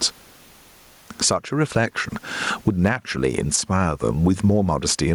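Gain pumping runs through the whole clip. The gain swings by roughly 15 dB, pulling loud and soft parts closer in level and squashing the sound, likely from excessive input gain driving a fast limiter.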